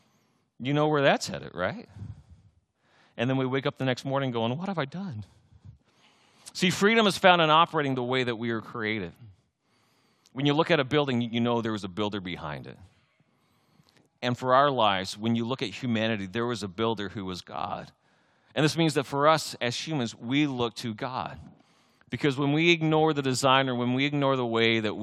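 No technical faults can be heard anywhere in the speech recording, and the signal stays steady and intact throughout.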